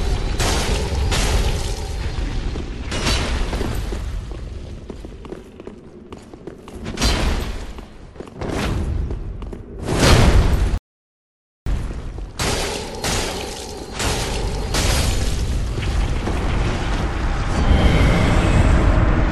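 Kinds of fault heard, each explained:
Rebuffering stall: The player runs short of downloaded audio and waits for more. At 10.78 s the sound drops to silence for about 0.89 s. It then picks up exactly where it stopped. Nothing is skipped, but the clip runs almost a second longer.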